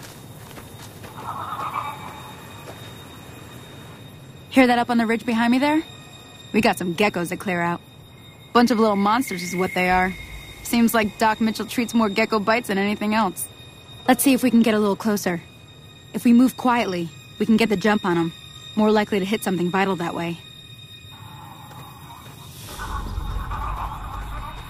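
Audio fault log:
No faults heard.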